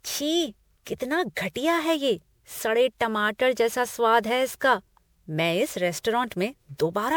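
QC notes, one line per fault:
Throughout, generation loss: the speech has a swirly, hollow, smeared quality, and consonant attacks are blurred, more than a single MP3 pass at the bandwidth heard would explain. Content still extends to about 20.7 kHz, which fits a 128 kbit/s MP3 chain. The likely cause is repeated decoding and re-encoding, roughly seven times over, with each pass quantising again on a shifted frame grid, so noise and spectral holes pile up.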